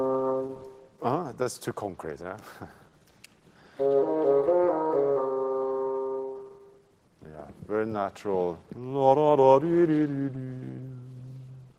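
The sender's audio clock runs about 2% slower than the receiver's, a clock drift between sender and receiver that keeps starving the jitter buffer, so small timing hiccups recur unevenly across the audio as the receiver compensates. At 1.43 to 1.46 s, a short stall from a late packet leaves the buffer empty and the receiver holds the last sound for 16 ms before resuming at the same point, so nothing is lost but that moment lingers slightly. From 1.90 s to 11.43 s, repeated timing corrections repeat short pieces again and again to keep pace with the slower sender, playing at 98% speed and adding roughly a fifth of a second overall, which comes across as faint, irregular stutters and a slightly dragging, unsteady tempo.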